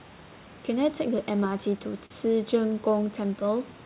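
Clock drift between sender and receiver runs through the whole clip. The sending side's clock is running slow, by something around 4 percent relative to the receiver. Audio therefore arrives a little more slowly than it is played out, and the receiver's jitter buffer keeps drifting toward empty. The result is a steady pressure to stretch the signal rather than a single audible event. This speech sits over room noise about 23 dB down and is band-limited to 4 kHz, which is consistent with G.711.

Repeated timing corrections answer that drift from 0.99 s to 3.74 s. To keep the buffer from running dry, the receiver repeatedly duplicates or extends short slices of the signal. In total it adds a few tens of milliseconds, roughly 40 ms, which plays the stretch back at about 99 percent speed. Each edit is tiny and they fall at uneven spacing. The effect is a faintly dragging, slightly unsteady pace rather than distinct clicks.

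Scattered short gaps appear between 1.19 s and 2.12 s. Around four separate packet-sized holes open up in this stretch, the longest only a few tens of milliseconds. The receiver conceals each one by carrying the preceding sound forward, covering on the order of 70 ms altogether, a small share of the span. Nothing drops out to silence. Instead, each patch is heard as a brief smear, tick or stutter in the flow of the speech.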